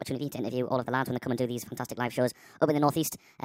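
Speech runs throughout at the wrong sample rate: it sounds high and hurried, sped up by a factor of 1.5 and raised about 7 semitones, a ratio that fits material captured at 32 kHz being played back at 48 kHz with no conversion. On a spectrogram the harmonic stacks and formants sit proportionally higher and the syllables are compressed in time. The waveform looks squeezed horizontally, with shorter gaps between bursts.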